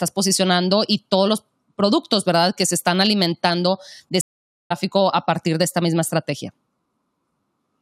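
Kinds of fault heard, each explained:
Stream reconnect: the link dropped and the player restarted its decoder mid-stream. After "se están alimentando de", the waveform goes flat and the spectrogram blank from 4.21 to 4.72 s; speech resumes at "a partir de esta", jumping roughly half a second ahead.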